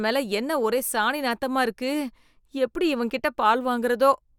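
Nothing in this bit of speech stands out as a technical fault, so there's nothing to flag here.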